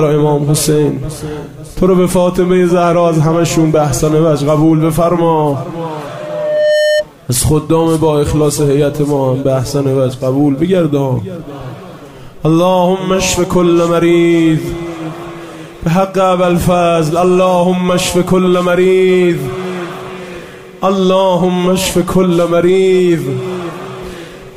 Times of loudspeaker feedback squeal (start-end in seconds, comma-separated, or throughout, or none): 6.07-7.05